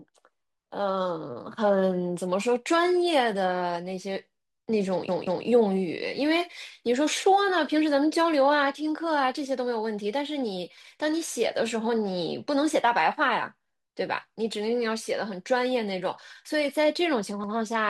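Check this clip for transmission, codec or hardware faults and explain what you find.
A stutter cuts into the speech twice. At 5.09 s a stretch of about 186 ms plays twice more, adding 0.37 s, and at 17.44 s a 93 ms stretch repeats once. These are repeated frames: compressed blocks, which fits two frames then one, were written or sent again, so the decoder replays them.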